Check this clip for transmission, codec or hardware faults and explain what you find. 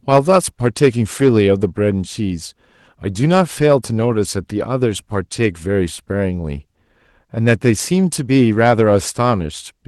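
Two faults are audible, both near the start of the speech, where the Opus call path limits the audio to about 12 kHz.

Hard clipping, from 0.11 s to 1.64 s: the louder syllables carry a harsh, crackly fuzz. The level was driven about 5 dB beyond what a stage could pass, so the waveform peaks were sliced flat instead of rounding over. Those squared-off tops create extra harmonics high in the spectrum, heard as that gritty edge on every peak.

Lost packet rebuilt from error correction, from 1.19 s to 1.25 s, inside the clipped stretch: for about 40 ms the sound turns rougher and noisier without dropping out. That span suggests two lost packets. Each was replaced by the low-bitrate backup copy carried in the following packet, so the decoder filled the gap with coarser audio.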